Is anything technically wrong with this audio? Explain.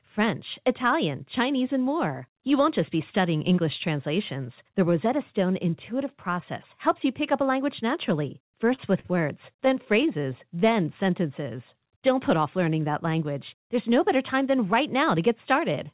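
Yes, there's a run of jitter-buffer trouble in the back half of this speech clip. The call path itself sounds like narrowband telephone audio with nothing above 4 kHz, which fits G.711 mu-law.

Short stall from a late packet, twice: just after "up a language naturally", at 8.76–8.80 s and again at 9.00–9.06 s. A packet showed up late and the buffer ran dry, so the receiver held the last sound for 23 ms and then 45 ms. Nothing's lost, but that bit sounds briefly frozen, adding delay each time.

Repeated stalls (stutter): from 9.52 to 10.53 s the buffer emptied nine times, with no single gap longer than 14 ms and 88 ms filled in total. About 9% of that stretch is stretched-out sound, so it drags and stutters.

Jitter buffer slow-down: from 10.59 to 11.97 s the receiver rebuilt its reserve by repeating pitch periods and pause fragments, adding 118 ms. The speech plays at about 92% speed with the same pitch, so sounds come out drawn out.

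Jitter buffer speed-up: from 13.99 to 15.87 s it went the other way, trimming short pitch-period slices, roughly a tenth of a second in all, to cut excess delay. Playback runs at about 104% speed at unchanged pitch.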